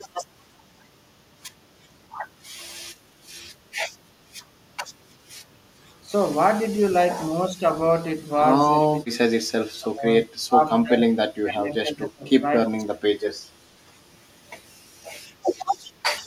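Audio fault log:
6.0 to 13.1 s (at 6.04–6.18, 7.35–7.64, 8.56–9.31, 9.81–10.04, 10.44–10.62, 10.83–12.44 and 12.65–13.06 s), speech suppressed in double talk: the speech repeatedly dips. The first two dips are shallow, about 10 dB, and then they deepen to about 25 to 30 dB, with the longest dip of roughly a second between 10.83 and 12.44 s. The likely cause is that both ends were talking at once, and the echo canceller, unable to tell this talker from the loudspeaker echo, turned both down.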